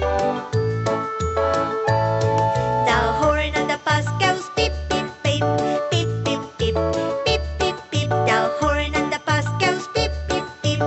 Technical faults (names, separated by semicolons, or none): none